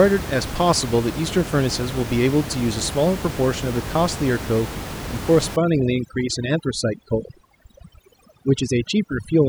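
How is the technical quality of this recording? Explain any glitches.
The speech carries room noise about 10 dB below it, and from 5.56 s to the end at 9.49 s there is overdone noise removal. An over-aggressive noise reducer drives individual frequency bands to near silence, so the background becomes twinkling specks; unlike codec artefacts, the gaps follow the noise floor.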